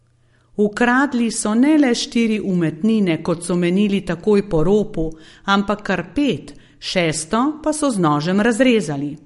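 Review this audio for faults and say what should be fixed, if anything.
Throughout the speech, nothing is present above 11.2 kHz, and the coding damage is plainly audible as a watery, swirling texture where quiet spectral detail flickers between frames. The likely cause is MP3 compression at a starved bitrate, consistent with roughly 48 kbps. Encode at 128 kbps or higher, or deliver a lossless master.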